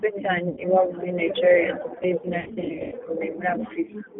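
Throughout, the speech carries G.729 codec damage at 8 kbit/s. The low-rate pulse-excited model leaves it audibly rough and synthetic. On a spectrogram, energy sits only between about 150 Hz and 3.4 kHz, with smeared, grainy harmonics instead of clean striations.

VoIP packet loss concealed by the speech codec hits from 0.49 to 0.61 s, about 80 ms missing, just before "iwabo muri". It hits again from 2.40 to 2.94 s, right after "ndetse izina", where 340 ms is lost in gaps spread over 520 ms, the longest 100 ms. The decoder repeats its last pitch and filter with falling gain. The result is a buzzy tone or coloured noise that fades and stays weak afterwards. The spectrogram shows frozen, flat bands, and the waveform shows tapering envelopes.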